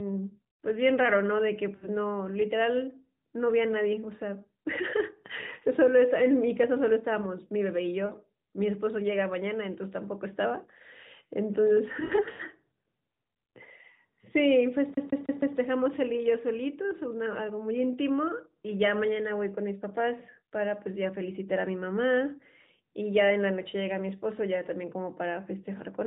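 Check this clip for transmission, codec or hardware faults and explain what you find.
Two kinds of fault are audible in this narrowband AMR-NB speech, which carries nothing above 4 kHz.

Lost AMR speech frames occur at 1.76 to 1.88 s, 8.06 to 8.13 s, and 11.99 to 12.43 s. Corrupted frames failed their checks, so the decoder extrapolated from the last good frame with decaying gain. The first two gaps, about 60 ms and 40 ms, fit runs of three and two 20 ms frames and come out as short dips or warbles. The third spreads about 240 ms of losses over 400 ms, with its longest run near 100 ms, giving a stretch of smeared, fading, rough speech.

A CD stuck on one turn runs from 14.94 to 15.58 s. The laser jumped back at the same point on each revolution, so a 158 ms slice of speech plays four times with a brief mute at every jump, giving an even, rapid stutter.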